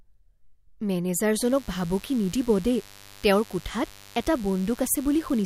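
Speech clip where, from 1.36 s to the end, switching spikes leaking in from a dimmer, rectifier or missing shield produce mains buzz on a 50 Hz fundamental, a steady raspy layer about 25 dB below the speech.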